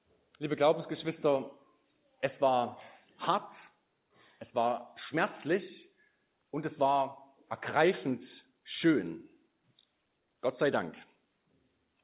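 No faults can be heard anywhere in the audio, which has passed through a call path whose band stops at about 4 kHz, consistent with a narrowband G.711 A-law codec at 64 kbps.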